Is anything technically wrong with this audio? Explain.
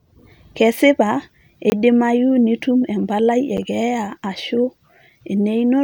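Yes. The speech has two blocks of digital silence: a 20 ms gap from 1.70 to 1.72 s, heard as a short hole, and a briefer one at 3.57 s, lasting 8.5 ms, heard as a tick. In each, a run of samples drops to silence, the kind of gap left when an output buffer isn't filled in time. Unlike a fade-out dropout, there is no taper, just an abrupt switch to total silence.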